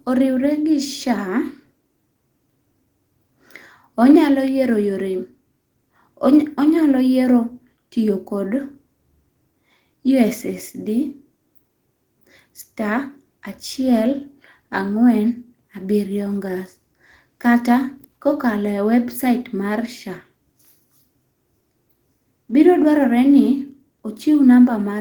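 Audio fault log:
The speech signal stays steady and continuous from its first moment to its last, with nothing heard that departs from a normal recording and playback path.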